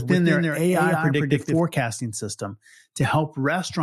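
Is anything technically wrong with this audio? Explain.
Yes. From the start to 1.6 s, a doubled audio track: a second copy, about 5 dB quieter, trails roughly 150 ms behind, likely from a slower capture path. Unlike echo, it has no decay or room colour and stops abruptly.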